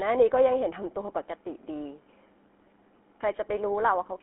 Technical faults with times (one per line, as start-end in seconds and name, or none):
0.00-4.22 GSM full-rate codec